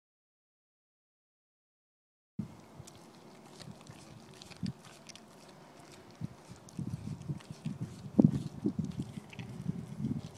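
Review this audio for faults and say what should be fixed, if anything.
An audio dropout to silence runs from the start to 2.39 s: the clip opens in silence, with no room tone, before the sound begins mid-flow. The waveform shows a flat line there, the spectrogram a totally blank band. The likely cause is lost input, a disconnected device, failed link or stray mute, while recording continued writing silence. Secure connections, check mutes and monitor input levels before recording starts.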